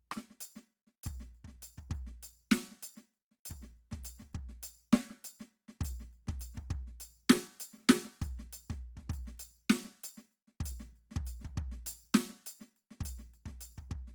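The music carries plainly audible damage from start to finish that sounds like Opus compression, likely from encoding at a low bitrate, consistent with about 24 kbps in the codec's music mode. Tones come out rough, grainy and noisy rather than clean, because every band's energy is kept but the detail is filled in with noise or copied from lower bands. A spectrogram would show few holes and full bandwidth up to about 20.2 kHz, with smeared, noise-like texture replacing sharp harmonic lines.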